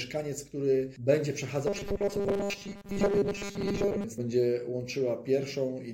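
From 1.67 to 4.04 s the audio turns into a rigid metallic buzz at 200 Hz: robotic sound from repeated short buffers, likely a 5 ms chunk replayed for most of that stretch while fresh audio stalls. Unlike distortion, the buzz's pitch stays locked regardless of the source.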